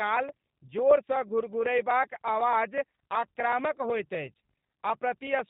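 Across the whole recording the speech carries the plainly audible stamp of the G.729 codec, whose rough, slightly synthetic quality points to an 8 kbit/s stream. The decoder rebuilds each short frame from a vocal tract filter, a pitch predictor and a handful of pulses, so fine detail is lost. On a spectrogram everything stops at 4 kHz, with a blank band above and blurred, grainy harmonics below.

From 3.82 to 3.86 s there is a brief episode of VoIP packet loss concealed by the speech codec. The gap fits a single lost 10 ms frame. The decoder filled it by extending its last pitch and filter settings at reduced gain. Because later frames build on that guess, the sound stays weak or distorted for about 40 ms in total. The waveform shows a dip in amplitude there, and the spectrogram shows unnaturally regular, smeared harmonics.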